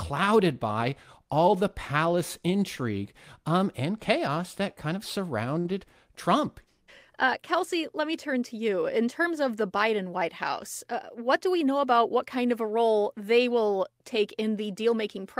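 Around 5.59 s, running to about 5.67 s, the speech hits a short stall from a late packet. The next chunk of audio simply wasn't there in time, so the jitter buffer drained and the receiver filled the gap by holding the last sound for about 52 ms. Nothing is actually lost. You just hear that sound drag on a touch too long, with a faint buzzy or dipping quality, before it picks up where it left off, now running 52 ms later.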